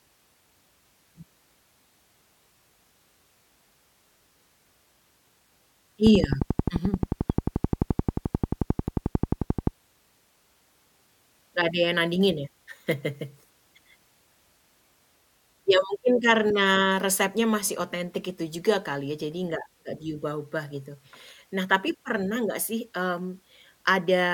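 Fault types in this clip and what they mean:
Train of clicks: a run of near-identical pulses repeating at a steady 11.4 per second from about 6.07 s to 9.68 s, some forty in all, each standing roughly 15 dB above the speech and ticking through the pauses as well. The likely source is electrical interference or a faulty connection or power supply. Unlike random crackle or a lone pop, these clicks keep the same shape and an even spacing, which gives them a mechanical, metronome-like tick.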